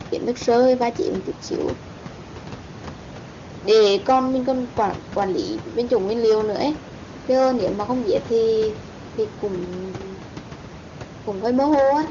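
No technical faults can be heard anywhere in this recording.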